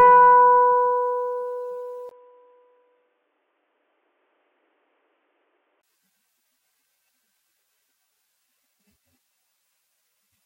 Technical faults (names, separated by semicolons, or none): input switched to a poorer device